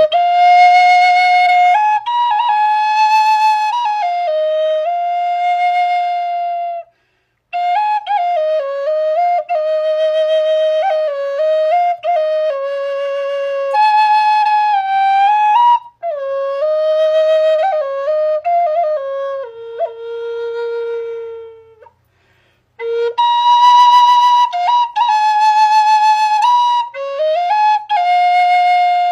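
At 13.70 s a stream segment was likely skipped: one chunk of the segmented stream failed to load and the player moved straight on to the next. The sound jumps abruptly ahead, with a brief blip from 13.70 to 13.76 s marking the splice.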